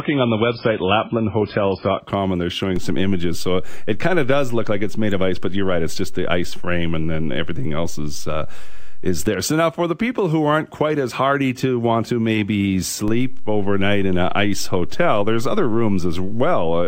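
For the first 2.0 seconds the speech sounds dull and smeared, with nothing above about 5.3 kHz and strong codec artefacts. Then, with no gap, the treble returns and the grain clears. This is an adaptive stream starting at a low bitrate. The player began on a cheap version of the stream so playback could start at once, which points to something like MP3 at 16 kbit/s. Once it had gauged the connection it switched to a fuller version, closer to 128 kbit/s.

At 2.76 s a low thump cuts in under the speech, and the offset lasts until 9.27 s, while the talking itself carries on unaltered. That is a DC step. The waveform's zero line suddenly shifted to an offset, as happens when a converter recalibrates or an input carrying a DC bias is switched in. It lasted for roughly six and a half seconds, and each jump registers as a thump.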